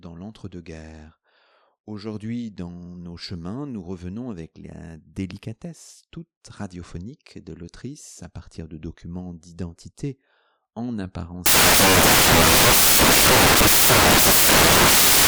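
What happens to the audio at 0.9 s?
Nothing goes wrong at 0.9 s; the speech there plays through cleanly, with no dropout, click or distortion.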